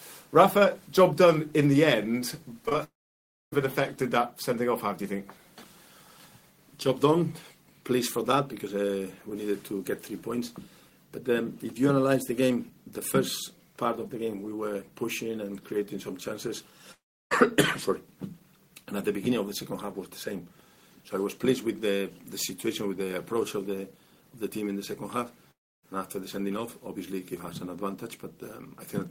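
From 2.65 to 2.76 s, three short concealed packet losses arrive back to back. Each loses about 20 ms. The receiver bridges every gap by extending the preceding sound, then blends back. The result is a brief smeared wobble.

Right after, at 2.84 s, the sound breaks off. A fading continuation gives way to silence lasting about 0.61 s, and audio resumes at 3.54 s, with 0.68 s missing. This is likely a long network dropout. It recurs at 16.92 to 17.33 s, with 0.4 s lost, and at 25.51 to 25.85 s, with 0.32 s lost.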